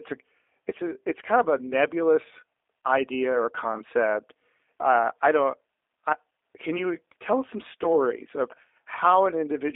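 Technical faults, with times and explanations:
Throughout, G.729 codec: the speech sits in a narrow telephone band from 300 Hz to 3.6 kHz and has a plainly audible rough, buzzy, synthetic edge. Each short frame is rebuilt from a vocal tract filter, a pitch predictor and a few pulses, which fits an 8 kbit/s coder like G.729A. A plain band-limiting filter would only dull the sound. Here the waveform itself is resynthesised, which gives the coarse, slightly artificial texture.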